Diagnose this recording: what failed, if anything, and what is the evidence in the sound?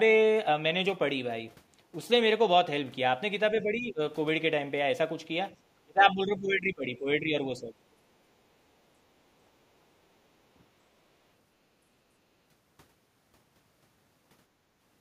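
Call processing is the stage here. The speech sinks from 3.62 to 4.01 s by around 10 dB, then harder from 5.83 to 7.73 s, by roughly 20 dB. That's likely speech suppressed in double talk: the echo canceller couldn't separate this talker from the far end, so it ducked both.

Same stage, different symptom: background gated by the echo canceller. Between 12.11 and 12.24 s the room sound drops by about 11 dB for roughly 150 ms, then comes straight back. The canceller clamped the mic while the loudspeaker was playing and then released it.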